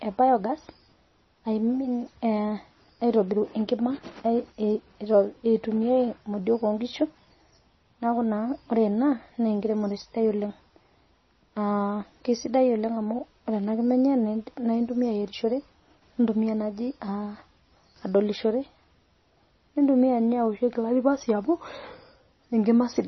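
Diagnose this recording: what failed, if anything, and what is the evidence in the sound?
Throughout, the speech sounds watery and dull with nothing above 5.9 kHz, likely heavy MP3 compression at a starved bitrate truncating treble in the codec stage.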